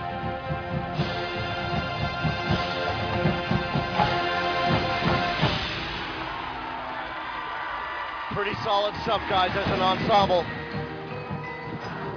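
Nothing stood out as a technical fault on listening to this recording.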